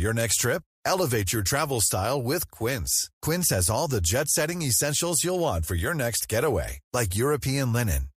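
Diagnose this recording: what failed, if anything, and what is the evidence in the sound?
Nothing failed at any stage of this speech recording, and no part of the sound points to a fault. There is no evidence in the audio that calls for a diagnosis.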